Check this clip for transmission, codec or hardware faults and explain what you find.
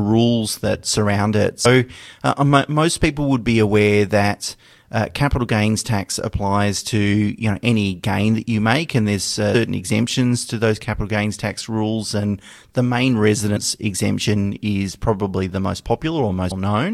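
The speech jumps ahead four times because compressed frames were skipped. Each time a short piece of speech vanishes. At 1.64 s, after "that surround it" and before "uh most", roughly a fifth of a second is lost. At 9.54 s, after "you make and there's" and before "exemptions to those capital", about 150 ms goes. At 13.55 s, between "the main" and "exemption is probably", about a tenth of a second is lost. At 16.50 s, near the end, roughly a fifth of a second is missing. Each skip covers several whole frames that were missing or refused by the decoder.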